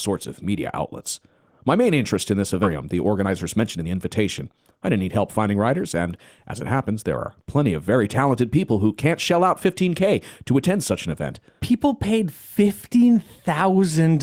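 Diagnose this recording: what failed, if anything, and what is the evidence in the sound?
At the network and jitter-buffer stage, about a second of queued speech was discarded, probably as the buffer overflowed, while later audio was already waiting. The result is a skip ahead between 2.63 and 2.65 s: the speech jumps forward with no silence or fill, its two sides joined almost directly.

Also at the jitter buffer, excess queued audio was drained by cutting short pitch-period pieces repeatedly. That is a jitter buffer speed-up from 2.75 to 5.55 s: the speech runs at 112% speed at unchanged pitch and sounds hurried, losing about a third of a second in total.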